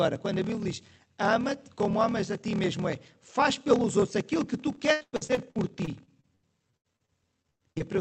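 From the start and through the whole speech clip there is a block size mismatch (padded). Each written block, which fits 1024 samples, is shorter than the block the next stage reads, and the remainder is zero-filled. This produces a steady 38.3 Hz buzz, and delivery runs at 0.889 times normal speed with pitch roughly unchanged.

From 4.75 s to 7.82 s, right after "outros aquilo que tu", repeated packet loss (robotic sound) sets in. Across 19 gaps, the longest about 100 ms, the receiver extends the previous sound to bridge missing audio, covering roughly a quarter of the span. The result is choppy with pieces missing, carried over the call codec's band limit at 8 kHz.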